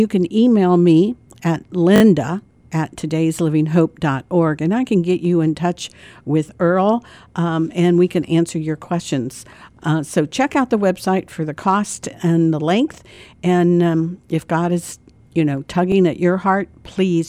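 A brief stutter interrupts the speech at 1.96 to 2.02 s, 6.08 to 6.10 s, 13.14 to 13.18 s and 15.92 to 15.94 s. Each is a repeated buffer: when fresh audio arrived late, the same short slice, which fits a 20 ms buffer, was replayed with a hard join. It plays three extra times in the first, twice in the third, and once each in the others, and little or no sound is lost.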